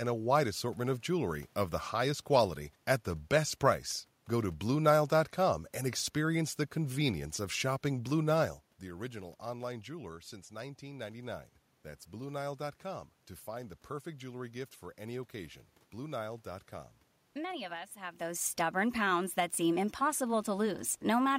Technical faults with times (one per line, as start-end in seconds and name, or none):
none